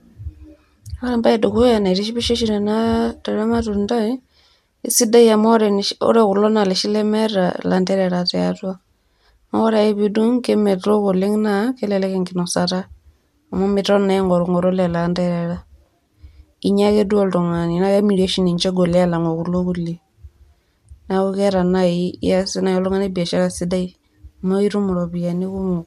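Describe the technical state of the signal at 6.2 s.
Generation loss spans the whole clip, likely from about five MP2 passes at 128 kbit/s: hollow, swirly speech; spectrogram empty above 17.3 kHz.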